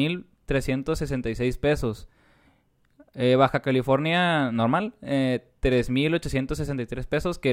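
A recording of speech, with no technical faults to report. Nothing in the signal chain can be heard going wrong at any point.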